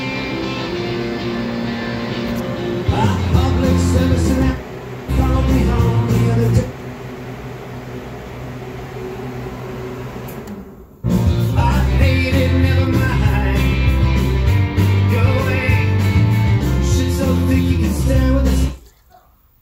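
Nothing technically wrong can be heard anywhere in the audio.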